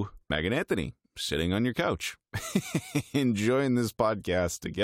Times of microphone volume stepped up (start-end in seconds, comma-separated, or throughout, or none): none